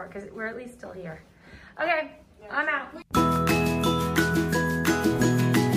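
From 1.02 to 5.70 s there's a click every 1.17 s, about five in all, likely clock drift buffer slips from a roughly 150 ppm mismatch.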